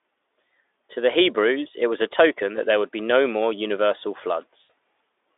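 At 4.63 s, close to the end of the speech, the sound briefly smears into a buzzy or noisy continuation that fades out over about 60 ms before the packets return at 4.70 s, after which the voice stays weak or distorted for a short while. This is VoIP packet loss concealed by the speech codec. A gap the length of roughly three 20 ms frames went missing, and the Speex decoder, whose narrowband 300 to 3600 Hz output shows at most faint coding damage elsewhere, filled it by repeating its last pitch and filter settings with decreasing gain.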